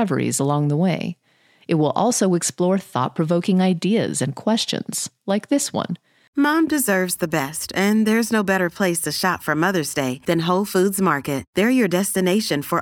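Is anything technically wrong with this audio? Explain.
No, nothing is technically wrong with this audio.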